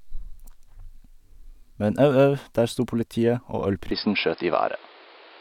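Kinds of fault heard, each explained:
Input switched to a poorer device: at 3.91 s the speech abruptly turns duller, likely from a change to another microphone or headset profile, with nothing above 5.2 kHz afterward, a level shift of about 5 dB and a new noise floor well below the speech. A spectrogram shows the upper band cut off sharply at the switch, without any gap in the waveform.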